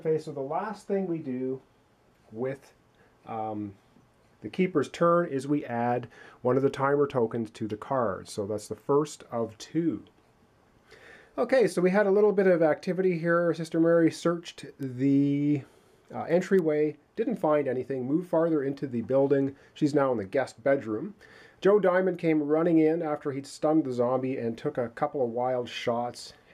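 At 14.83 s and again at 16.59 s a bit error spike cuts through the sound: a single corrupted sample whose value jumped by a power of two and returned, reaching about -23 dBFS and then about -17 dBFS. Each is heard as a brief, sharp tick with no relation to the surrounding audio. On the waveform it appears as a lone one-sample needle; on a spectrogram, as a thin vertical line spanning all frequencies.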